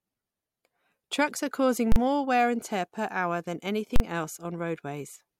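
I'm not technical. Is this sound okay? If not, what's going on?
No. The speech is interrupted twice by a sharp bang. The first comes at 1.92 s, right after "are causing" and just before "more wear and tear". The second comes at 3.96 s, after "tear per hour than". Each bang lasts about 40 ms. That is so short it sounds like a single hard pop rather than a gap. This is invalid numbers at full scale. A calculation went wrong and produced meaningless values. These were pushed to an extreme value far beyond the speech's own peaks, so the sound sits flat at that extreme for that brief moment.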